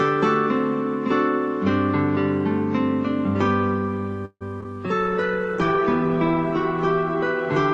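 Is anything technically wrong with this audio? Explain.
Yes. From 4.25 to 4.43 s the sound stalls, likely a call audio freeze: delayed packets emptied the jitter buffer, so the last sound was stretched and faded, ending in about 60 ms of silence. Two short concealed packet losses follow at 4.61 and 4.64 s. Each dropped about 20 ms, patched by extending the preceding sound, heard as a quick smear or wobble. From 4.99 s a call bitrate drop cuts the encoder from 96 to 15 kbps, staying lowest for about 1.5 s, making the audio rough and muffled.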